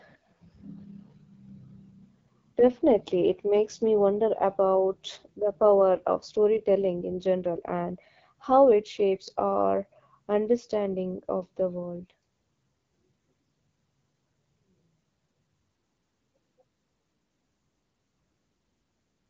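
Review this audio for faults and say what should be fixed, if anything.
The whole clip runs through an AMR wideband (HD Voice) codec, and it's clearly struggling. The speech sounds rough and raspy all the way through, with nothing above about 7.5 kHz. That grittiness points to one of the lowest AMR-WB rates, around 8.85 kbit/s, where the pulse-driven vocal model runs short of bits. To prevent it, carry the call at 12.65 kbit/s or higher.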